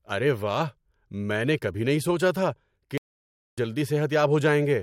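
Right after "کبھی نہیں سوچا تھا" at 2.98 s the speech just drops out for about 0.6 s, until 3.58 s: a playback stall, likely the player starving for data.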